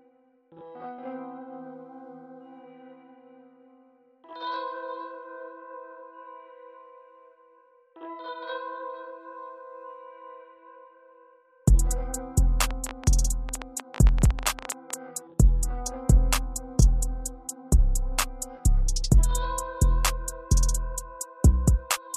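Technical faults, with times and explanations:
12.71 to 14.95 s, train of clicks: for a little over two seconds a rapid ticking sits on top of the sound, about 13 clicks per second, with uneven spacing between them, and some 30 in all. Each click has much the same sharp shape and peaks at roughly 10 dB above the surrounding audio, so they stand out clearly. Repeated short pulses like these point to a likely source in electrical interference or a faulty connection or power supply injecting spikes into the signal.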